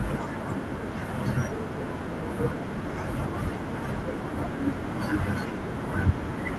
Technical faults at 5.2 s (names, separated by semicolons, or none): none